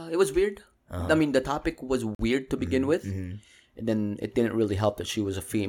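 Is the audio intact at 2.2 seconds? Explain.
No. A Bluetooth stall falls right there. Just after "mean the topic was", the sound drops to silence from 2.15 to 2.19 s, a gap of about 45 ms. It then resumes with "to begin". The likely cause is radio interference delaying packets on the wireless link. The headphones' buffer empties, so playback halts until the resent packets arrive. It is heard as a brief, clean cutout.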